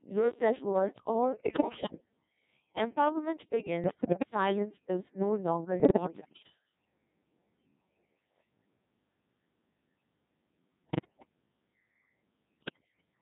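The whole clip runs through the Codec 2 vocoder, and heavily: the speech is buzzy and robotic because only pitch, voicing, level and a rough spectral shape get sent, then rebuilt from sine waves. That sound fits the 1.6 kbit/s mode.

On top of that there are five bursts of bit errors on digital voice radio. They land at 1.32 to 2.05 s right after "low self worth", at 3.84 to 4.30 s just before "is no longer", at 5.80 to 6.50 s just after it, at 10.84 to 11.29 s, and at 12.60 to 13.06 s. Roughly one bit in ten is corrupted, a bit more in the second burst, and each hit frame's pitch, level and timbre get scrambled. You hear warbles, bleeps and jumpy robotic gibberish lasting about half a second to 0.7 s, consistent with ten to seventeen damaged frames per burst.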